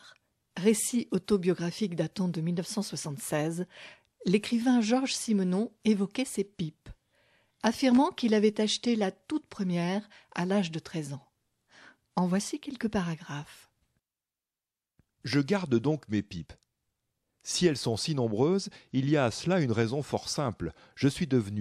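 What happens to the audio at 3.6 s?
Nothing goes wrong at 3.6 s; the speech carries on intact through that moment, with no break, glitch or change in the sound.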